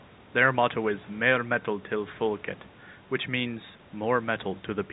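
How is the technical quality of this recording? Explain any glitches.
No glitches or faults are audible.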